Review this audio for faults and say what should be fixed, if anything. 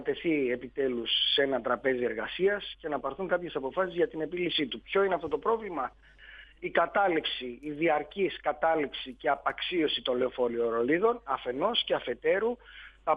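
Nothing stood out on listening, so there is nothing here that needs fixing.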